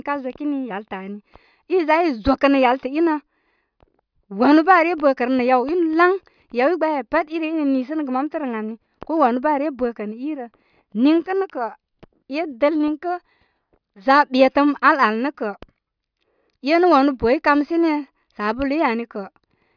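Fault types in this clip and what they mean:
No faults can be heard in this speech recording.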